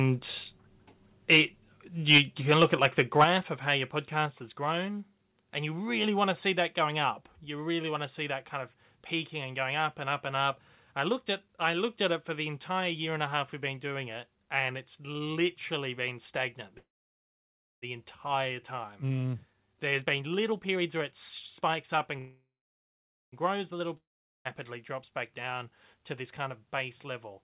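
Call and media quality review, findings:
Harsh crackle on the loudest syllables at 1.32, 2.1, 2.55–2.86 and 3.19 s, with peaks flattened about 5–10 dB past the converter's limit. Worst at 2.1–2.2 s, where roughly a tenth of the samples are squared off. Likely microphone overload: input gain set too hot, so the converter cuts off the waveform tops.

Sudden drops in level of voice and background together at 2.18, 3.24, 4.26 and 7.32 s, each about 2 dB except the 3.24 s step of about 6 dB just before "of how your". The 7.32 s step comes after "see that going up". The 2.18 and 3.24 s steps follow shortly after a clipped peak. Likely microphone volume stepped down by the call software's gain control, lowering the device's input volume in a single step to stop the overload.

Buzz that decays to near silence for about 1.04 s at 16.78–17.84 s, right after "it's literally been stagnant". Speech resumes where it stopped with nothing lost. 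A second one at 22.19–23.34 s lasts about 1.14 s, mostly silent. Likely call audio freeze: delayed packets emptied the jitter buffer, the receiver stretched the last sound into a fading tail, and a gap was inserted.

Hurried delivery at unchanged pitch at 18.84–21.13 s (118% speed, about 0.4 s removed), 21.61–22.18 s (113%) and 25.57–26.24 s (106%). Jitter buffer speed-up: excess buffered audio, trimmed by cutting out short pitch-period chunks repeatedly to reduce delay.

Fading buzz into near silence at 23.97–24.47 s, then speech comes back further on with about 1.04 s of content gone. Likely long network dropout: no packets for that stretch, the receiver concealed it with a decaying tail, and the missing audio was skipped rather than replayed. The whole clip is band-limited with nothing above 4 kHz, consistent with a 64 kbps G.711 mu-law call path.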